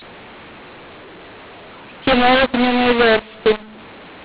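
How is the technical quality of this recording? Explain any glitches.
Poor. A mu-law and A-law mix-up runs through the entire clip, over a telephone band that correctly stops at 4 kHz. The speech was coded with G.711 A-law but decoded as mu-law, which scrambles sample levels into harsh, gritty distortion. Unlike clipping, the pauses fill with hiss instead of staying silent.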